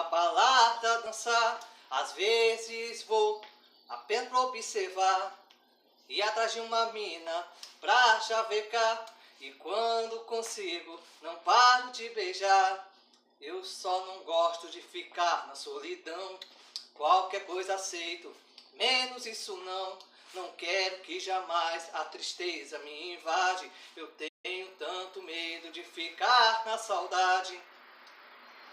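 At 24.28 s the sound cuts to silence for about 160 ms before resuming at 24.46 s, a playback stall, likely from the player running short of data.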